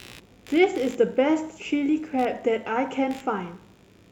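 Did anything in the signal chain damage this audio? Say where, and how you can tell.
Yes, in the analogue wiring: computer activity noise runs throughout, buzzing around 70 times a second, about 30 dB below the speech, as load currents shift the shared ground. A spectrogram shows regular vertical striations unrelated to the speech.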